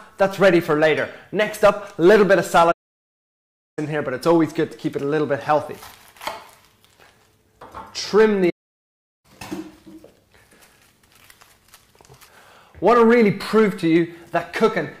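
From 2.71 to 3.79 s there is a playback stall. The player most likely ran short of data or had its output thread held up, so nothing reached the output for about 1.06 s. The sound cuts out abruptly in mid-flow, leaving a clear gap of silence, and then picks up again once the player recovers.

At 5.64 s a repeated buffer occurs. Fresh audio failed to arrive in time, so the device replayed its last block, which fits a buffer of about 5 ms, two extra times. Because the repeated piece is so short, it comes across as a tiny click or buzz rather than an audible stutter, with hard joins at each repeat, and around 10 ms of the real audio is lost there.

A second playback stall runs from 8.49 to 9.25 s, silencing the output for about 0.74 s. It is a shorter dropout than the first, but it has the same sudden cut and the same resumption after the pause.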